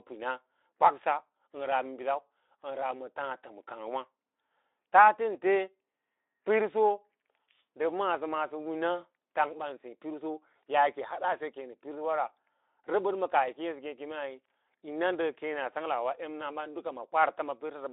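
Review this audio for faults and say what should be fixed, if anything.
Nothing here needs fixing.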